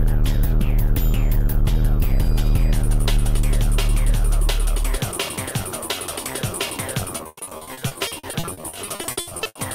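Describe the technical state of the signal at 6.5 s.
Nothing at 6.5 s suggests a fault: the signal is intact at that point, with no dropout, clipping, distortion or other defect to be heard.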